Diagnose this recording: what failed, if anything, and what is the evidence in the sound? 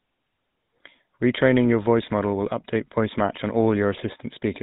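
The codec stage failed: the speech has passed through the GSM full-rate codec, and the damage is plainly audible from start to finish. The audio stops at 4 kHz, so it sounds narrow and muffled. A buzzy, gravelly roughness sits on the voice. The codec rebuilds the voice from a vocal-tract model driven by a coarse, regularly spaced pulse train. That sparse excitation causes the grit. The loss fits the 13 kbps full-rate mode.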